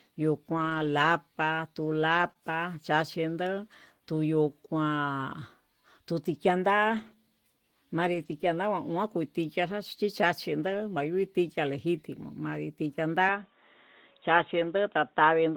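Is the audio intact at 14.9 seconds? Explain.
No. From 13.29 s to the end, the speech turns dull and boxy, with nothing above 3.8 kHz, a faint new background noise and no gap or level jump at the change. The likely cause is the input switching to a poorer device with a narrower band.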